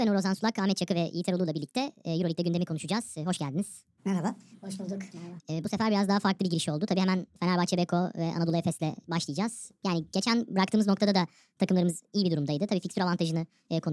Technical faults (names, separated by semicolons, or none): wrong sample rate